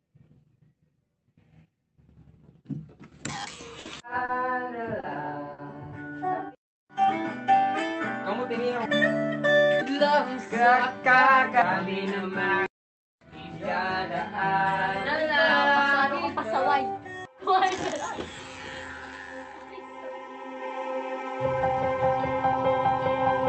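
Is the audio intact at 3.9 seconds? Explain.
Yes, no sound is lost there, but a short stall from a late packet ends just before, from 3.79 to 3.87 s. The jitter buffer ran dry, so the last sound was stretched for 60 ms, heard as a brief hold or faint buzz, and playback resumes 60 ms later.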